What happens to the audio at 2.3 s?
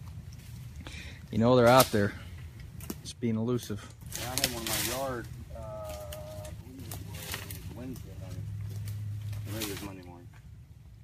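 Nothing goes wrong at 2.3 s; the audio plays through that moment intact, with no dropout, click or other fault.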